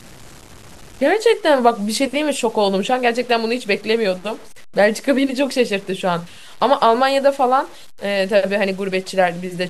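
Throughout the speech, the signal has likely been reduced to about 7 bits and truncated without dither, so each sample is simply chopped down to one of very few levels. Because that rounding error tracks the waveform instead of being spread as steady hiss, it turns into grainy distortion that rises and falls with the speech. It sits roughly 25 dB below the signal, roughening quiet stretches most, where low-level sound sputters between steps or drops out.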